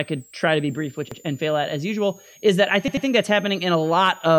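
Switching supply whistle runs throughout: a high tone wandering between about 6.2 and 8.4 kHz, near 7 kHz and roughly 30 dB below the speech, from a power supply switching in an audible burst mode or beating with another supply.

Repeated buffer at 1.12 to 1.21 s, after "to be brief which": new audio arrived late, so a 93 ms chunk, which fits a 4096-sample buffer, plays once more with a hard join before "and fail at as". At 2.88 to 3.07 s, after "usual is that I", the same chunk length repeats twice, causing a stutter before "that's happening".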